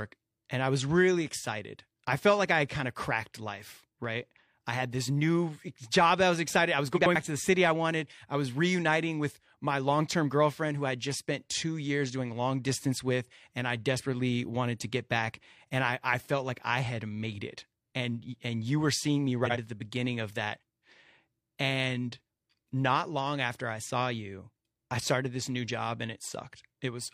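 At 6.96 s, just after "was excited I was", frames play out of order until 7.16 s, before "to the city I". Two neighbouring runs of frames were swapped, and each fits a block of about 93 ms. The speech stutters in a garbled flutter. The same fault returns at 19.45 to 19.57 s, between "you were seeing me" and "at the beginning of". This time the blocks fit about 46 ms, so the flutter is shorter. No time is lost.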